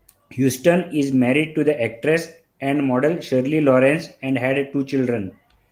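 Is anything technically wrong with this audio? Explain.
No, nothing technically wrong turns up here, and this bit of speech comes through without any problems worth flagging.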